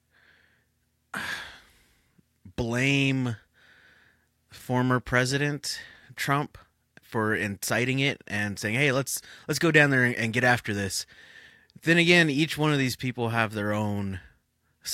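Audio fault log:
No audible faults found.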